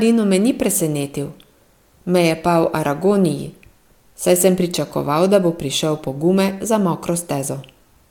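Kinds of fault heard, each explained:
No technical fault can be heard anywhere in this speech recording; the signal stays steady and intact throughout, with no dropouts, clicks, distortion or other defects.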